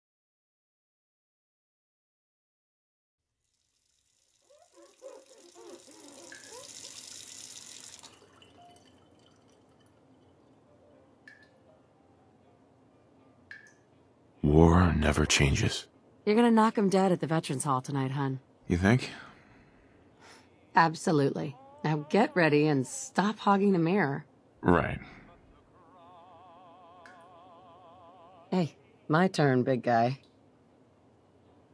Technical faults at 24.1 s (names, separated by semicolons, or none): none